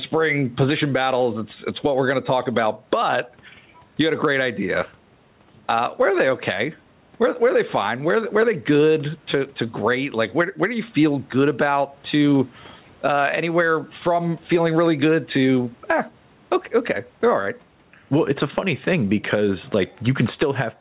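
Throughout, the gain swings by around 10 dB, pulling down under each loud syllable. This is gain pumping, likely excessive input gain driving a fast limiter.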